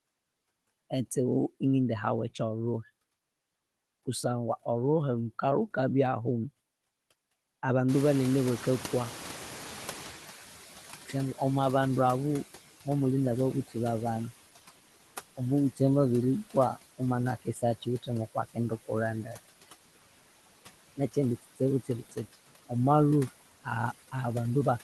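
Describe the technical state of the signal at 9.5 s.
At 9.5 s the signal is inside a noise suppressor catching up episode that runs from 7.88 to 12.5 s. The room noise jumps by about 24 dB around 8 s, and the suppressor's noise estimate takes about 4.6 s to follow. The new noise therefore passes with too little reduction, then sinks by about 12 dB. On a spectrogram the broadband floor brightens abruptly and fades gradually over those seconds.

Noise suppressor artifacts run throughout the clip and are present here too. Frame-by-frame band gains cut steady noise by about 15 dB, so the residue dips between phrases and swells under speech. A spectrogram shows blotchy, flickering noise texture that gates in time with the speech energy. The call path's roughly 12 kHz bandwidth ceiling is visible above it all, which fits an Opus stream near 20 kbps.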